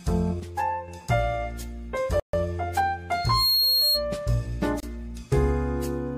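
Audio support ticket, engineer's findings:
Sudden gain jump, 0.40 to 0.88 s. Level drops about 6 dB in one step, background noise with it, then returns. Waveform: abrupt envelope step, no ramp. Spectrogram: all bands dim together. Likely an unramped digital gain change or bit shift.

Bluetooth stall, 2.20 to 2.34 s (137 ms) and 4.80 to 4.83 s (27 ms). Sound cuts to hard silence, then resumes. Waveform: flat-line gaps. Spectrogram: full-height blank columns. Likely the headphone buffer ran dry while interference delayed packets awaiting resend.

Loudspeaker feedback squeal, 3.14 to 4.05 s. Single 4.3 kHz tone swells over roughly 0.3 s to about 5 dB above the program. Spectrogram: bright horizontal line at 4.3 kHz. Waveform: envelope swelling into a sustained sinusoid. Mic picking up its own speaker, loop gain above unity at that frequency.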